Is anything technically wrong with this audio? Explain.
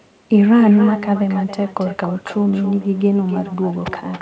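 Yes. There is an echo with no canceller throughout: the far end's loudspeaker feeds its microphone, returning the speech roughly a third of a second later, about 15 dB quieter and thin. The audio also stops at 8 kHz, which fits a wideband call codec such as G.722.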